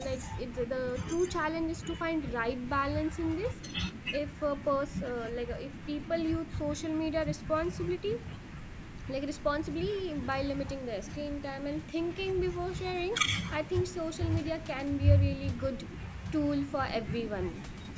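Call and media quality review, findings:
Nothing to flag on this one: the speech carries the usual call microphone processing, with its low bass trimmed and nothing above 8 kHz, and no faults turn up anywhere in it.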